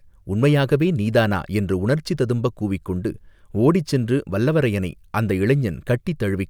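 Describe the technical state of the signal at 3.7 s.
The signal at 3.7 s is intact, with no fault audible at that point in the speech.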